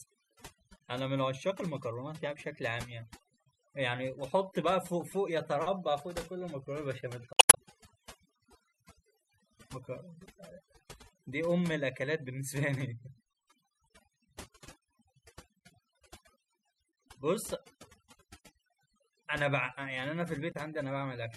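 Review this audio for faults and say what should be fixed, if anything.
The speech has overdone noise removal all the way through. The reduction was set so hard that bands near the noise estimate get pulled right down, taking quieter parts of the voice with them. That leaves a lowered background with twinkly specks. Back the reduction amount off, or redo it from the unprocessed recording with gentler settings.

There's also damaged data in a compressed stream at 0.77–0.81 s, 7.33–7.58 s and 20.52–20.56 s. Corrupted bytes there make the decoder misread frames and hunt for the next header, so you get short glitches, the middle one clearly longer. Re-export or re-fetch from a clean source and verify file integrity after transfer.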